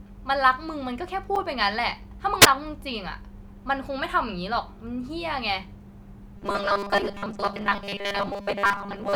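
Speech runs about nine seconds and carries three separate faults. At 1.36 s there is a block of digital silence. For 5 ms the signal drops straight to silence and comes back with no fade. It lands as a tick. From 2.41 to 2.46 s comes a wireless microphone squelch dropout. Hiss swells as the radio link fades. The receiver's squelch then mutes the output for about 8 ms before the sound returns. From 6.37 s to the end the audio turns into robotic sound from repeated short buffers. A rigid, metallic buzz near 200 Hz sets in, though it still roughly tracks the speech. Most of that stretch is made of repeats. The likely cause is audio arriving too seldom, so the software loops 5 ms pieces and skips the real material.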